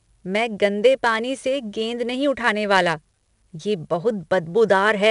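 Speech encoded throughout with 4-bit ADPCM, each sample stored as a coarse adaptive step from a prediction, a rate that fits about 88 kbps. The quantisation error rides on the speech as plainly audible gritty hiss, and nothing survives above 10.7 kHz.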